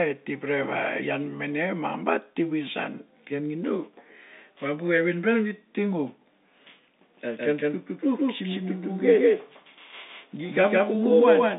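A slower second capture path likely feeds the same signal back in, producing a doubled audio track in this telephone-band speech clip: from 7.14 s to the end, a full-band copy about as loud as the original trails roughly 150 ms behind, starting abruptly, without decay or room colour.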